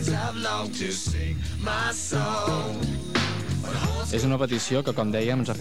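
No technical faults can be heard anywhere in the recording; the signal stays continuous and steady throughout.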